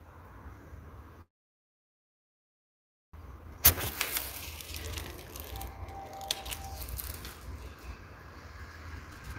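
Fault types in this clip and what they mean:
Call audio freeze: From 1.21 to 3.16 s the sound stalls. A brief tail of the last sound carries on, then there's near silence for most of the roughly 1.9 s gap. When it resumes, it picks up right where it stopped, so nothing seems lost, just pushed later. The likely cause is packets held up in transit, leaving the jitter buffer empty until they finally arrived.
Jitter buffer speed-up: This is the receiver trimming a backlog by cutting out tiny slices, a pitch period or a few at a time, repeated rapidly. From 3.27 to 3.60 s the sound runs at about 118% speed, losing around 70 ms. Near the end, from 9.07 to 9.36 s, it's much more rushed at 162%, with about 200 ms squeezed out. The pitch stays put throughout.
Jitter buffer slow-down: Here the receiver rebuilds its reserve by repeating single pitch periods or bits of quiet, over and over. From 3.74 to 4.22 s the sound drags at about 83% speed, with 90 ms padded in. 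It comes just after the speed-up. The pitch holds, but things sound drawn out, maybe with a faint warble.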